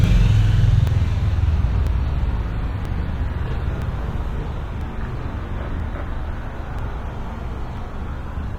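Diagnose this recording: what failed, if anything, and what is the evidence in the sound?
Channel delay (doubling) runs through the whole recording. Every event arrives twice at equal level, the second copy about 40 ms behind the first, so transients sound like a short slap echo rather than a clean single hit. The stage is the driver or buffer: one channel was held back by a long buffer before the two channels were summed to mono, so the late copy stays audible as a separate repeat.

Overlap between stream segments shows up as eight tiny clicks or skips at 0.87, 1.87, 2.85, 3.82, 4.81, 5.80, 6.79 and 7.77 s. They are spaced almost exactly one second apart, matching a 1.0 s segment length. Each removes between 5 and 12 ms of audio. This failed at the playback or segment-assembly stage. Adjacent segments carried overlapping time stamps, and the player trimmed the overlap from material that was never duplicated, so the waveform jumps at each boundary.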